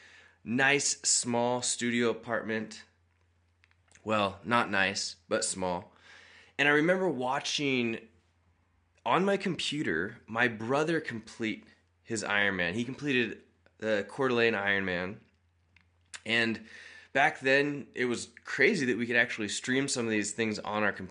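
No technical faults are audible.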